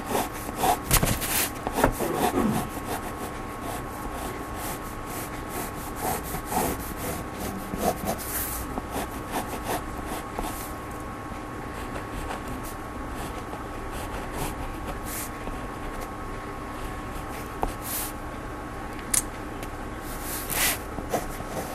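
MP2 compression runs throughout this recording of everyday sounds: the audio is dull and carries a granular, gurgling distortion, most likely from MPEG Layer II coding at a low rate, around 80 kbps. Upper sub-bands switch off and the remaining ones are coarsely quantised. DAB burbling appears at 6.64 to 6.69 s, 12.19 to 12.48 s and 21.30 to 21.33 s, longest in the middle burst. Weak reception let a small fraction of a percent of bits through error correction, corrupting samples so short blips of noise appear in single sub-bands.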